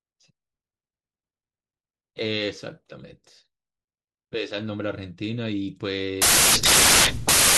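Samples built from the wrong bytes take over this speech clip from 6.22 s to the end at 7.57 s: the bytes of each sample are assembled in the wrong order or alignment, so the rapidly changing low bits dominate, and the speech collapses into loud, harsh noise close to white.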